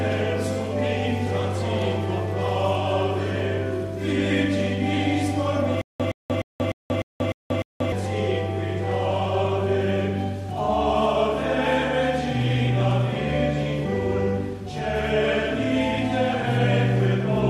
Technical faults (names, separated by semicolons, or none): stutter with silent gaps